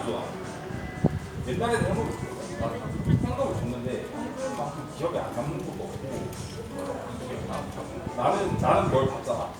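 No technical faults are audible.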